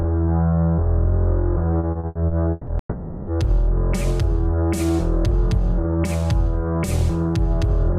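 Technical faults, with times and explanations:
1.79–2.70 s, repeated packet loss (robotic sound): six gaps, longest 160 ms, are patched by stretching earlier music. Nearly half this span is filled, so it turns choppy with pieces missing.
2.79–3.30 s, long network dropout: the music stops for about half a second. A fading buzz or hiss covers the hole, then 90 ms of silence, likely from arriving audio being lost.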